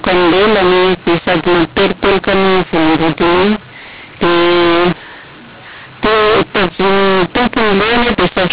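Telephone speech band-limited below 4 kHz suffers throughout from mu-law and A-law mixed up: mu-law bytes read as A-law scramble levels, so pauses fill with hiss, unlike G.711's faint, signal-following noise.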